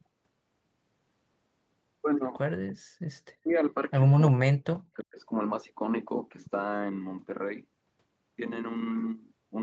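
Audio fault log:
3.42–3.52 s, 4.32–4.83 s and 5.02–5.2 s: speech suppressed in double talk. The talker's level drops sharply in three short bursts, by about 30 dB in the first and about 40 dB in the two later ones, with the longest gap lasting about half a second. The likely cause is the other side talking at the same moment, so the echo canceller could not tell near speech from loudspeaker echo and pulled both down.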